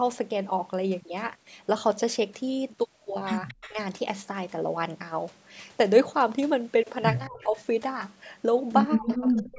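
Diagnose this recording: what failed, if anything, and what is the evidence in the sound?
Echo leak at 3.48 to 3.73 s, 7.4 to 7.63 s and 9.11 to 9.29 s is a call-processing fault. A faint, delayed copy of the speech sits under the main signal, trailing it by 231 ms each time. It is about 20 dB below the speech in the first instance, about 30 dB below in the second and about 15 dB below in the third. The far end's echo canceller likely failed to fully subtract its loudspeaker pickup, so the residue was returned down the line.

Speech suppressed in double talk is also a call-processing fault, heard at 3.69 to 3.77 s, 7.27 to 7.57 s and 8.97 s to the end of the clip. Each dip overlaps one of the echo bursts. The level drops by roughly 10 dB in the first, brief dip, by roughly 30 dB in the second and by roughly 35 dB in the final half-second. The cause is likely an echo suppressor that could not tell the talker from the returning echo while both were active, so it attenuated everything.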